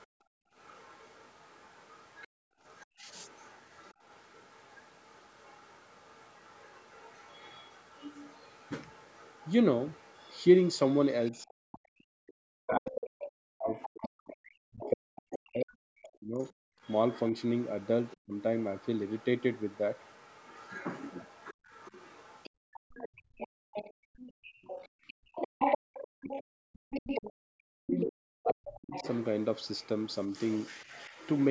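A speech recording with call microphone processing, nothing above 8 kHz, carries other side's voice leaking through from 0.0 to 30.85 s: a second voice sits roughly 20 dB under the talker, likely because the far end played over a loudspeaker and the echo canceller left a residue in the microphone signal. Background gated by the echo canceller occurs from 0.07 to 2.59 s (about 0.7 s of dips in total, deepest about 38 dB), at 12.14 to 12.25 s (about 37 dB), at 16.69 to 16.81 s (about 34 dB) and from 21.54 to 26.9 s (around 3 s in total, about 37 dB). Each time the canceller clamps the microphone while the loudspeaker plays, and the room tone drops away before returning. Speech suppressed in double talk occurs at 2.87 to 3.06 s, 11.31 to 18.34 s and 27.35 to 31.11 s, totalling roughly 0.15 s, 4 s and 1.5 s. The talker's own voice sinks by around 40 dB or breaks up, likely as the canceller, unable to separate near speech from echo while both sides speak, turns everything down.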